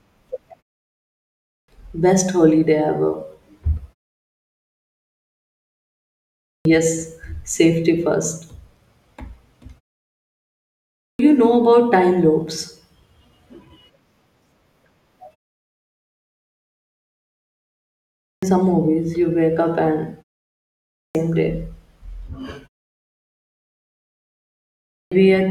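Clipped start after a pause occurs six times: at 1.21, 6.24, 10.71, 17.96 s (just before "some movies you wake"), 20.67 s (right after "you wake up and") and 24.7 s. In each case the output device sleeps through the preceding silence (0.5 to 2.7 s) and takes about 0.41 to 0.48 s to wake. The phrase opening is swallowed, so the speech bursts in mid-sound. A waveform jumps from flat silence to full amplitude, and a spectrogram shows a hard vertical onset edge.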